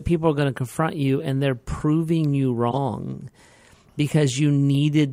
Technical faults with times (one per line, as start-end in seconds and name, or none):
1.20-1.23 corrupt frame decoded
2.70-2.78 corrupt frame decoded
4.75 corrupt frame decoded